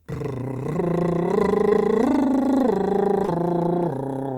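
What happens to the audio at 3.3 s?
The music briefly smears between 3.25 and 3.29 s, a short wobble. This is short concealed packet loss. About 20 ms of audio never arrived at the decoder in time, so the receiver covered the gap with roughly 21 ms of invented continuation, extending the last received sound, then crossfaded back into the real signal. That synthetic patch is what the ear catches as a smear.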